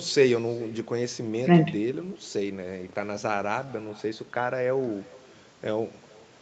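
Throughout the speech, an echo with no canceller returns the talker's own voice roughly 0.4 seconds later, about 24 dB below it. Unlike room reverberation, it is a distinct delayed copy arriving after a network round trip, over audio reaching up to 8 kHz.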